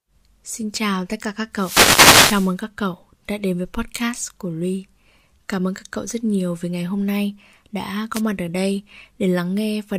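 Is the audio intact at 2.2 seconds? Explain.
No, 2.2 s falls inside a wireless microphone noise hit from 1.52 to 2.56 s, between "chào tất cả các" and "các cậu đã đến". Reflections cancel the FM signal, so receiver noise surges into a swishy burst of static.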